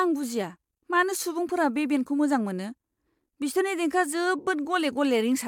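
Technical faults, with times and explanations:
No technical faults can be heard anywhere in the recording.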